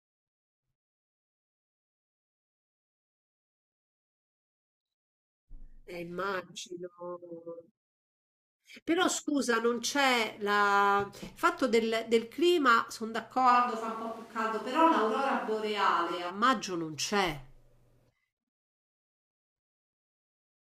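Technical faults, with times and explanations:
13.52 to 16.29 s, switch to a distant microphone: the speech suddenly turns roomy and hollow, loses its low end, and picks up background noise about 30 dB below the speech, while the overall level stays roughly the same. The sound snaps back just as abruptly at 16.29 s. This is likely a recording that fell back to a microphone further from the speaker, which captures more room reflections and ambient noise and less of the close-up bass.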